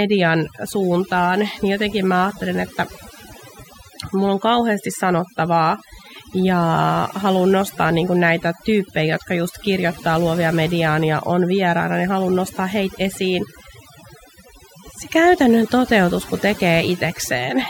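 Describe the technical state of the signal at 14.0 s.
Overdone noise removal is present at 14.0 s, as it is across the whole recording. A noise reduction stage set far too aggressively is pulling individual frequency bands down or out entirely whenever their level sits close to its noise estimate, and the softer parts of the speech are being removed along with the noise. The pauses drop and break up into twinkling specks.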